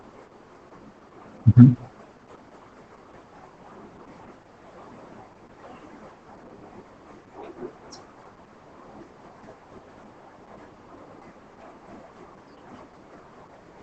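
From start to finish the speech sounds muffled, hoarse and faintly robotic, with nothing audible above about 8.7 kHz. This is heavy Opus voice compression in its SILK linear-prediction mode at wideband. At a bitrate that sounds close to 10 kbps, the coder keeps only the band up to roughly 8 kHz and models each short frame, consistent with 20 ms, with a coarse excitation signal. That coarseness is what leaves the rasp and the synthetic edge.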